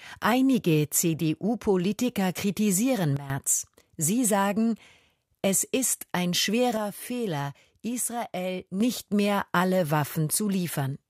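At 3.17 s the level drops abruptly by about 12 dB and snaps back at 3.30 s. From 6.77 s to 8.81 s it falls again, by about 6 dB. Both are sudden gain jumps, likely a gain setting applied without a ramp. The sound and the background noise fall together in a single step. A compressor would instead move the level gradually.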